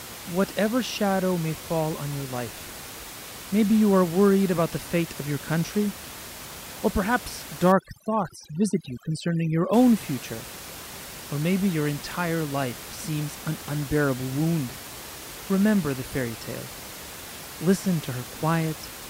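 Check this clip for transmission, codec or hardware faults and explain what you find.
One fault stands out: overdone noise removal from 7.72 to 9.73 s, just after "or perhaps". Noise suppression set far too strong zeroes bands near its noise estimate, turning the room noise, which sits about 15 dB below the speech elsewhere, into a lower, broken-up background. Isolated twinkling specks remain. On a spectrogram the background empties into dark gaps scattered with bright dots.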